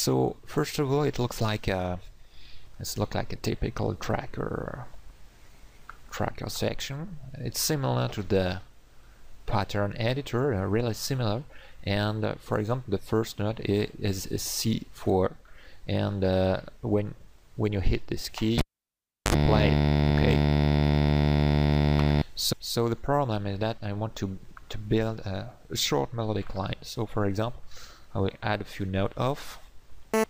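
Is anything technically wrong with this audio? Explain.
Yes, there's a cable pulled and plugged in back again, from 18.59 to 19.34 s. You get a pop as the live lead comes out, then roughly 0.7 s of near silence with nothing connected. As it goes back in, the tip touches first without the ground, so about 58 ms of 50 Hz mains buzz leaks through. A second pop follows as the connection seats fully and the sound comes back.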